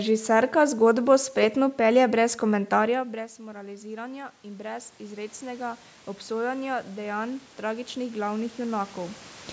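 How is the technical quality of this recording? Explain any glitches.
The recording has one clear glitch: automatic gain rising from 2.91 s to 9.27 s, right after "zgodbo spretno pelje brez". When the talker moves back around 3 s, the input falls by about 18 dB. The gain control responds by gradually adding about 13 dB, so the voice and the room noise swell up together. On a waveform, the envelope shrinks and then widens steadily. On a spectrogram, the noise floor brightens along with the voice.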